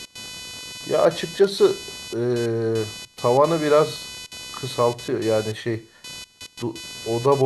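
Throughout, computer activity noise from ground-coupled load changes buzzes near 500 Hz, about 15 dB down, drawing harmonic spectrogram lines unrelated to the speech.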